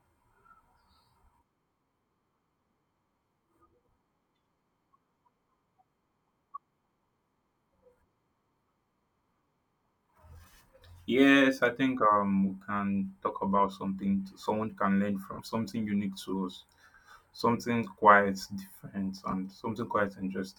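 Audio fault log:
15.33–15.39 s, 17.38 s, 19.31–19.33 s, lost LE Audio frames: brief noisy smears replace the sound after "someone can learn", just before "quite different" and just after it. They last 60, 10 and 20 ms, fitting lost 10 ms frames. The decoder refilled each gap with the last spectrum under random signs.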